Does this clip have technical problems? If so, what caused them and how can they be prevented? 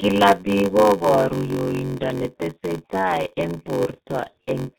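Yes. Throughout the speech, heavy G.723.1 codec damage leaves it muffled and hoarse, with smeared consonants, consistent with a roughly 6.3 kbit/s stream. A spectrogram shows nothing above 4 kHz and blurred, slowly changing formants. Encoding with a wideband, higher-bitrate codec prevents this.

A block size mismatch (padded) also runs the whole way through: each block is topped up with zeros, producing a 93.8 Hz buzz and playback slowed to 0.861 times normal speed at roughly unchanged pitch, which fits a 512-sample read. The waveform shows evenly spaced short flat gaps about 10.7 ms apart. Matching the block sizes between stages prevents it.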